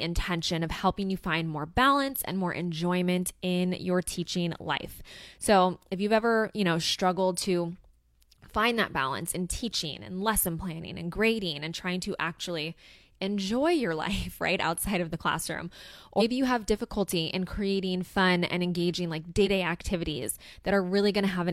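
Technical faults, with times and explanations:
16.16–16.22 s and 19.42–19.47 s, compressed frames skipped: the speech jumps forward twice, once right after "outside of the classroom" and before "you have difficulty in", and again after "fun and engaging like". Each time about a fifth of a second of audio is lost, roughly four frames left out. That skip length fits frames of about 46 ms.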